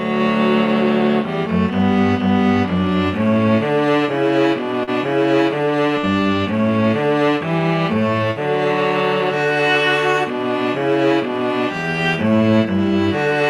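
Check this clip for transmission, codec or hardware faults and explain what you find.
Two short concealed packet losses, at 4.83 to 4.90 s and 5.99 to 6.06 s. Each time about 40 ms of audio arrived too late, and the receiver filled the gap by extending the preceding sound before blending back. This is heard as a brief smear. On a spectrogram, each event shows as a short stretch of frozen, blurred harmonics or noise.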